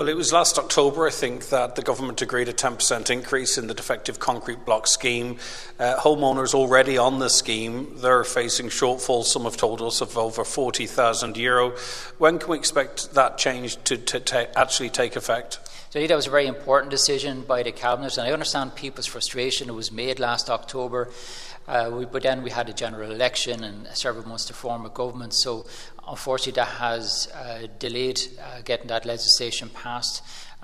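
At 25.61 to 25.66 s, a short concealed packet loss: a slice of audio arrived too late for the decoder, and the receiver extended the preceding sound for about 25 ms before easing back into the real signal, leaving a brief smeared blip.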